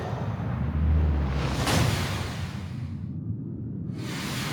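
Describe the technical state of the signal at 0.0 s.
The signal is intact at 0.0 s, with no audible fault at that moment.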